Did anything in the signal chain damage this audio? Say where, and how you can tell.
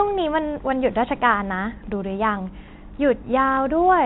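Yes, at the network stage: packet loss with last packet repeated, from 3.54 to 3.57 s, near the end of the speech. About 30 ms of audio went missing, which points to a single lost packet. The receiver filled the gap by replaying the previous packet, which comes through as a small blip.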